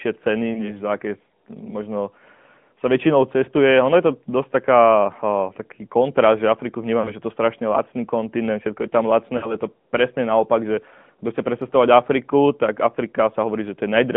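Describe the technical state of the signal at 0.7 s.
At 0.7 s the speech sits inside a lost AMR speech frame event running from about 0.54 to 0.81 s, just before "za aké možno". A single 20 ms frame failed to arrive intact, so the decoder filled the gap by repeating the previous pitch and vocal tract settings at reduced gain. The result is a brief warbly dip, and the voice returns weak or rough for a moment. On a waveform the envelope sags; on a spectrogram the harmonics smear into a flat, repeated pattern.

Underneath, the whole passage carries the AMR narrowband mobile codec at 10.2 kbps, which gives the voice a buzzy, synthetic edge. The line band runs roughly 150 Hz to 3.5 kHz, and nothing above 4 kHz survives. A spectrogram shows a hard ceiling near 3.5 kHz with empty space above, and thinned low end below 150 Hz. The codec damage is plainly audible.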